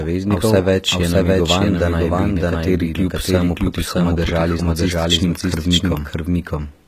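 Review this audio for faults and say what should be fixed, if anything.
Throughout the clip, every phrase is heard twice: a full-band copy at about equal loudness trails roughly 0.7 s behind, dry, with no decay. This doubled audio track likely comes from a second, slower capture path or two misaligned copies in the edit.

Across the whole clip, sibilants sound gritty and lispy, the treble is synthetic, and nothing extends above 14.9 kHz. This is HE-AAC compression, likely at a low bitrate around 20 kbps, with the upper band rebuilt from copied lower bands rather than the original harmonics.

To prevent both, route the recording through a single capture path with no duplicate tracks in the edit, and keep it uncompressed or at a high codec bitrate until final delivery.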